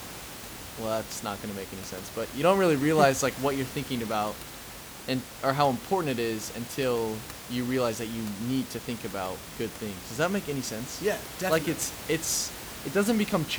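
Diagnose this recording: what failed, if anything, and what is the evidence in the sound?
Nothing in the signal chain has failed in this recording. The room's background noise sits about 14 dB below the speech, and it belongs to the acoustic space the microphone was in, not to any stage of the system.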